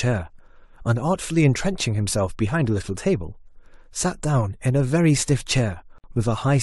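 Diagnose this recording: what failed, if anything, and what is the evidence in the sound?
At 5.98 s the speech drops into a gap of about 56 ms, smeared at its borders so the silent part is shorter, then resumes exactly where it stopped. This is a gap at a join of encoded pieces: separately encoded segments were spliced without trimming each encoder's start delay and final-frame padding.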